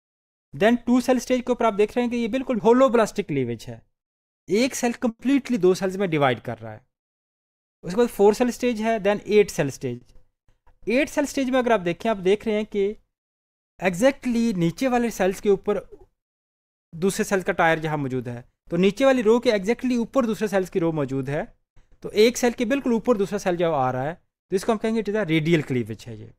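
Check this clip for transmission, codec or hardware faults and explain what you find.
Three kinds of network-timing fault show up here, all on the receiving side, and the two stalls lose none of the sound.

From 5.09 to 5.21 s there's a call audio freeze. The last bit of sound is drawn out for about 100 ms and fades, with a brief near-silence at the tail, before things pick up exactly where they stopped. The likely cause is packets held up in transit until the jitter buffer ran dry.

At 9.95 to 10.03 s there's a shorter stall from a late packet. One packet missed its slot, so the receiver stretched what it already had for about 60 ms, giving a held moment with a slight buzz or dip, then carried on with nothing dropped.

Then come three jitter buffer speed-ups: 13.64 to 14.43 s at 104% speed, 18.31 to 18.76 s at 108%, and 25.58 s to the end at 108%. The buffer had built up extra delay, so the receiver trimmed tiny pitch-period slices, a few tens of milliseconds' worth each time. 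The sound runs faster while the pitch stays put.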